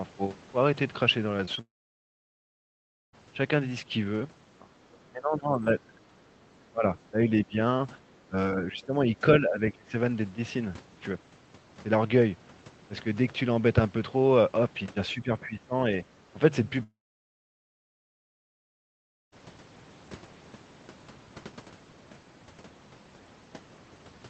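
Two brief smears break the speech at 1.45 to 1.49 s and 1.55 to 1.59 s, each a wobble lasting a few hundredths of a second. These are short concealed packet losses. About 20 ms of audio arrived too late each time, so the decoder extended the preceding sound to bridge the gap and then blended back into the real signal.

From 1.61 s to 3.15 s the sound trails off into a fading continuation and then near silence for roughly 1.45 s before resuming further along. From 16.83 s to 19.34 s the same thing happens over about 2.5 s, with some 2.4 s of silence. Each is most likely a long network dropout: nothing arrived, the receiver stretched the last sound until it died away, and the missing stretch is never heard.

The speech repeatedly sinks and thins at 4.60 to 4.80 s, 5.11 to 6.01 s, 6.70 to 7.56 s, 8.28 to 9.94 s and 15.13 to 15.72 s. The deepest dip is about 25 dB in the first, about 15 to 20 dB in the middle three and about 10 dB in the last. 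This is likely speech suppressed in double talk. With both ends talking at once, the echo canceller could not tell the talker from loudspeaker echo and turned the whole signal down.

Between 4.91 and 5.09 s a faint second voice is audible, about 35 dB below the main speech. This is most likely the other side's voice leaking through: far-end audio picked up from the loudspeaker that the echo canceller failed to fully remove. All of this passes through a band-limited call codec whose upper range stops around 8 kHz.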